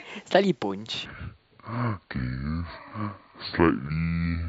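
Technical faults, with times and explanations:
1.06 s to 4.49 s, section at the wrong speed: from 1.06 s to the end, the speech plays at 0.604 times its recorded rate, so it drags and drops about ten semitones at once, turning deep and slow. The likely cause is this stretch being played against the wrong clock. On a spectrogram, the harmonics step down and crowd closer together at the boundary, and features stretch out in time. The waveform shows visibly longer cycles.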